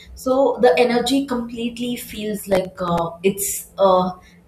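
A speech clip with a burst of gritty, tearing crackle from 2.52 to 2.98 s, right after "the energy completely feels". The texture is a rapid run of hard-edged glitches riding on the speech, then it stops abruptly. This is processor overload crackle: the processor repeatedly missed its deadlines for very short buffers, a few milliseconds each. Several misses in a row each replayed a scrap of old audio with sharp edges, and together they make the grit.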